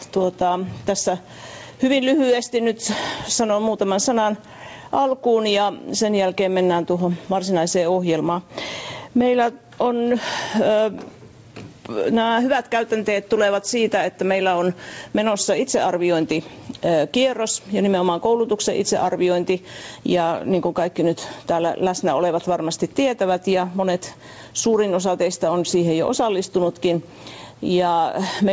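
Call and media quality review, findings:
Gain pumping, whole clip. Swing of about 10 dB. Loud and soft parts squashed together. Likely cause: input gain far too high, a fast limiter or compressor pulling it down. Band stops at 8 kHz, which fits a G.722 call path at 64 kbps.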